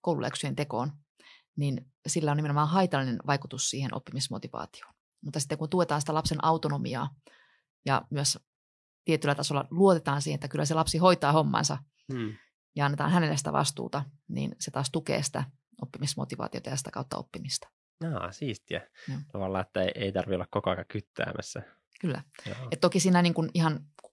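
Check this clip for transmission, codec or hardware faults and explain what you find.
Nothing turned up when listening through this speech, so there's no fault to report.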